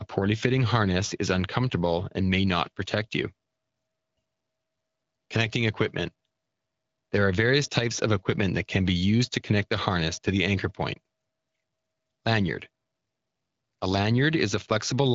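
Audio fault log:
No faults can be heard anywhere in this recording.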